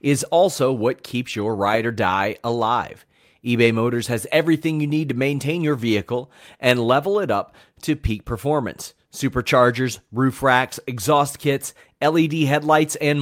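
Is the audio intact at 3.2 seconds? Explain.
Yes, at 3.2 seconds the speech plays through intact, with no audible dropout, click, distortion or other technical fault at that moment.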